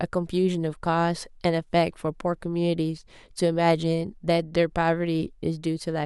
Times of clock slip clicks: none

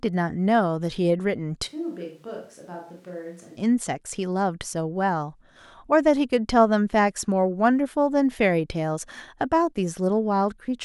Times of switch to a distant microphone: 1.69-3.56

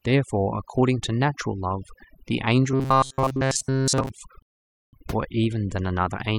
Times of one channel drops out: none

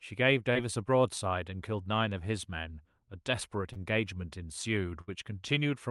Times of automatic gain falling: none

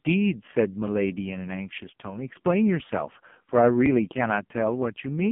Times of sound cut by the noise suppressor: none

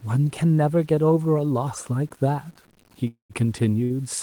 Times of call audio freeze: 3.07-3.33

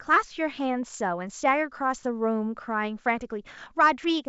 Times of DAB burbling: none

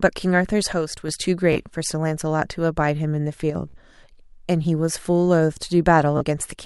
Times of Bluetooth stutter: 1.53-1.60, 3.69-3.74, 6.17-6.22

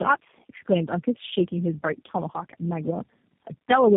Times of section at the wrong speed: none

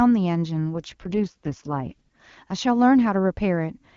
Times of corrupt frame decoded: none

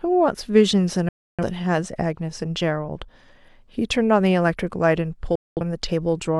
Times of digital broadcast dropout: 1.09-1.44, 5.35-5.61

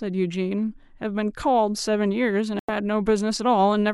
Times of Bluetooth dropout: 2.59-2.70

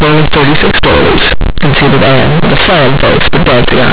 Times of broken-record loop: none

